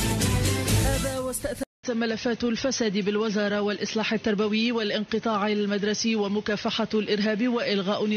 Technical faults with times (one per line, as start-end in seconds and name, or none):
1.63-8.17 input switched to a poorer device